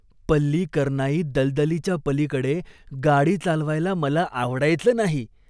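No technical faults occur anywhere in the speech, so there is nothing to describe in time order.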